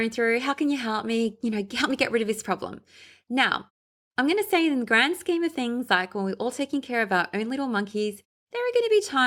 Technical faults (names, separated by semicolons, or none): none